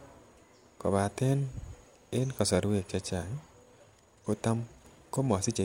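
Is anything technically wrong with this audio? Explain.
Yes. A time-stretched section runs from 3.49 s to the end, where the speech suddenly speeds up by 1.38 times while its pitch holds steady. This likely comes from software squeezing the passage by dropping short slices, which leaves it sounding rushed.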